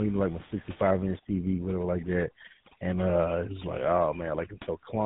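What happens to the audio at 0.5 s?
At 0.5 s the call is in the middle of tandem speech coding that runs through the whole clip. It seems to have been decoded and re-encoded twice by a low-rate mobile codec, most likely GSM full rate, with a standard telephone link between, so the second coder worked on already damaged speech. The speech sounds rough, muffled and warbly, with nothing above about 3.8 kHz. The room noise sits about 21 dB below the speech.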